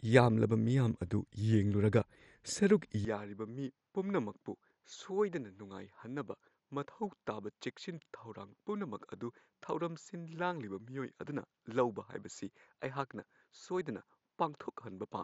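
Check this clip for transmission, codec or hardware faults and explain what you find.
Two faults are present in this speech clip: codec damage that runs throughout, and a change of input partway through.

MP2 compression, throughout: this is likely MPEG Layer II coding at a low rate, fitting about 56 kbps. With too few bits, upper sub-bands are dropped, leaving nothing above 12.7 kHz. The remaining bands flicker and gurgle, which sets this apart from a simple low-pass filter.

Input switched to a poorer device, from 3.05 s to the end: the sound abruptly turns duller, with nothing above 7.6 kHz. The level falls by roughly 10 dB and a faint new noise floor appears. This is likely a change of microphone. Unlike codec damage, it happens as a single step with no gap at the switch.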